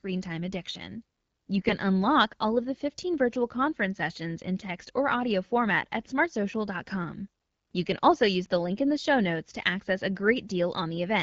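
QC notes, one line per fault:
1.57–1.73 s, AMR bit errors: right after "time addiction" and clearing before "unlock all of the", the sound goes briefly hoarse and gargly. Pitch and level hold roughly steady, which suggests a few percent of the weakly protected bits got flipped, about eight 20 ms frames' worth, while the core bits still passed their check. So the excitation pulses land in the wrong spots and the fine pitch, gain and spectral values drift, giving that scratchy texture over a light AMR-WB coloration.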